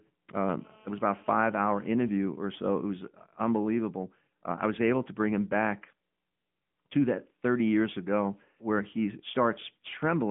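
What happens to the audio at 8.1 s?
At 8.1 s the speech is still under the AMR narrowband mobile codec that runs through the whole clip. It passes a 150 Hz to 3.5 kHz line band and rebuilds the voice from a vocal-tract model, so it sounds plainly buzzy and synthetic, consistent with a mid-rate mode around 10 kbps. A spectrogram shows nothing above 3.7 kHz.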